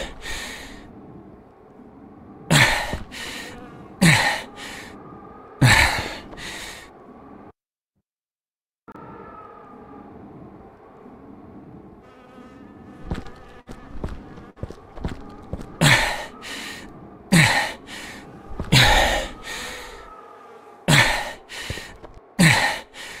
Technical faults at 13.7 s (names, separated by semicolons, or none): burst of packet loss